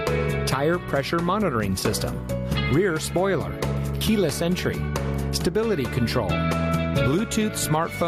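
Gain pumping runs through the whole clip, likely from input gain set far too high with a fast limiter clamping down on each loud sound. The gain swings by around 15 dB, leaving the sound squashed.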